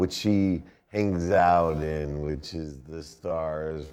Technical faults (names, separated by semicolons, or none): time-stretched section